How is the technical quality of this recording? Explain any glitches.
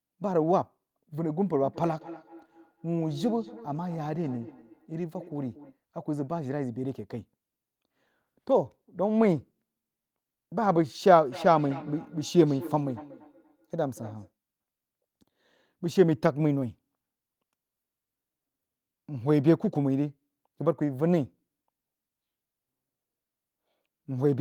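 The recording has feedback echo between two devices in two stretches. From 1.52 to 5.77 s and again from 11.32 to 14.32 s, the speech returns as thin, ringing repeats at about a fifth of a second, peaking at about 19 dB and then about 16 dB below the speech. A second device in the room replays the call and the first device's microphone recaptures it, beyond either echo canceller's reach.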